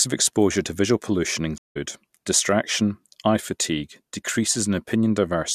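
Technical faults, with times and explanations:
1.58 to 1.77 s, stream reconnect: the speech drops out for about 0.17 s and then resumes at a point about 150 ms further along, so a short stretch of the speech is skipped rather than delayed. The connection broke, the player fell silent while it reconnected, and a fresh decoder then picked up the live stream where it stood, with the first frame fading in.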